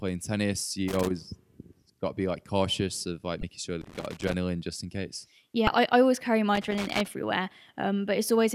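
Loose connector crackle runs from 0.88 to 1.11 s, 3.81 to 4.34 s and 6.55 to 7.07 s: a worn contact making and breaking chops the speech into irregular scratchy bursts lasting a quarter to half a second. Between these, damaged data in a compressed stream strikes at 3.40 to 3.43 s and 5.65 to 5.68 s, where the decoder misreads frames and loses sync. Unlike the ragged crackle, each of these is a single brief glitch of about 30 ms.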